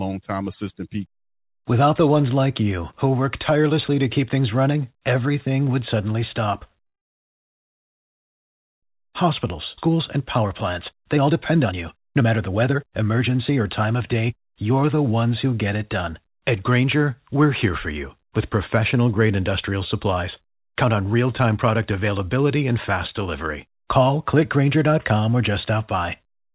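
Right after "everything would suddenly stop", at 6.86 s, the sound halts and goes almost silent for nearly two seconds until 8.85 s, then resumes where it left off with nothing lost. This is a call audio freeze, likely from packets held up in transit so the jitter buffer ran dry.

From 8.99 s to 10.46 s the audio runs noticeably faster but keeps its pitch, at about 114% speed. This is a jitter buffer speed-up: after the stalled audio arrived at once, the receiver trimmed small pitch-period slices, around a fifth of a second in total, to reduce the backlog.

Within that stretch, at 9.77 s, playback jumps forward almost seamlessly and roughly a second of speech vanishes. This is a skip ahead: a stretch of audio was dropped while later audio was already queued, so the two sides join nearly directly.

From 10.92 s to 14.85 s, just before "the ones who get", a second jitter buffer speed-up makes the speech sound hurried at about 119% speed, as the receiver cuts roughly 0.7 s more from the built-up delay.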